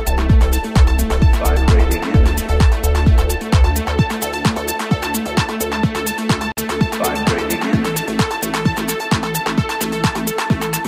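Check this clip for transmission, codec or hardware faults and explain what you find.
One fault is present: a gap at a join of encoded pieces. From 6.52 to 6.57 s, about 51 ms, continuous sound drops out and then resumes where it stopped. Separately encoded segments were joined untrimmed, so encoder start delay and last-frame padding remain. A waveform shows a brief flat notch with softened edges; a spectrogram shows a narrow vertical blank band across all frequencies.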